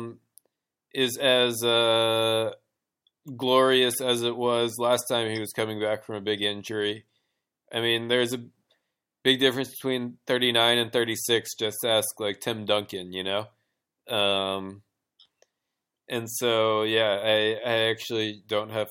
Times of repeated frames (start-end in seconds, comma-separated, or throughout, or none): none